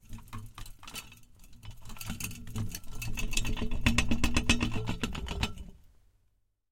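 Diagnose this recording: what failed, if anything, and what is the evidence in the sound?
Nothing stood out on listening to these sounds, so there is no evidence in the recording that any stage of the chain failed.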